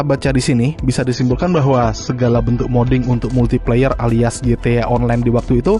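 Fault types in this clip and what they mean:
adaptive stream at a lower bitrate: from about 1.13 s to 3.13 s the stream switches down without a gap, treble vanishing above 6.9 kHz and artefacts rising, which fits a fall to a 24 kbit/s AAC rendition; a spectrogram shows a flat shelf cutting the upper band.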